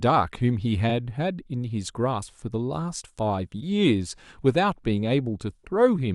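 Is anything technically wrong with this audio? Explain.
Yes. There are repeated frames at 0.89 to 0.93 s in this speech. A 40 ms block of compressed data was delivered to the decoder twice, so that stretch plays once more immediately after itself. The length fits two compressed frames being duplicated. You hear it as a brief stutter, a tiny skip-back where the same slice of speech sounds again, and the clip runs 40 ms longer than it should.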